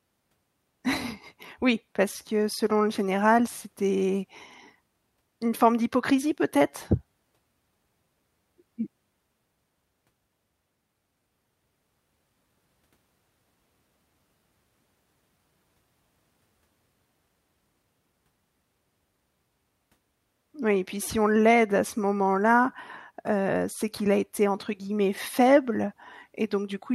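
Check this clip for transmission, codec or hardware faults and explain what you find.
Checked the speech recording and found nothing to report.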